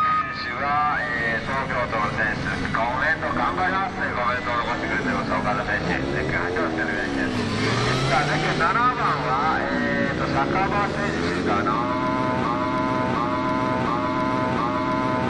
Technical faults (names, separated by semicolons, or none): broken-record loop